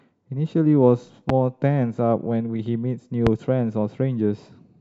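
A sudden voltage step, likely from a plug, switch, static discharge or driver glitch, gets added to the signal twice, producing a loud pop each time. The first, from 1.29 to 1.32 s, peaks roughly 15 dB above the speech. The second, from 3.27 to 3.29 s, is stronger at around 20 dB. Each is a single sharp, brief thump sitting on top of the speech, which carries on underneath without a break.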